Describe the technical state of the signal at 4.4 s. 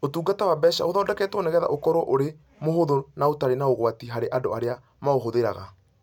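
At 4.4 s the speech signal is intact, with no technical fault present at that moment.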